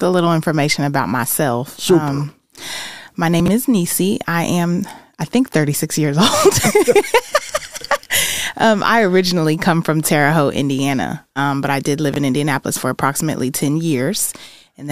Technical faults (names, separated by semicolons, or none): chunks out of order